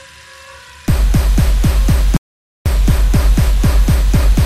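At 2.17 s the sound cuts off abruptly and returns at 2.66 s, leaving about 0.49 s of complete silence: an audio dropout to silence. The input was likely lost for that half second, through a disconnected device, a broken link or a brief mute, while recording continued and filled the gap with silence. Unlike a natural pause or noise gating, no background or room tone survives underneath, and both edges are hard.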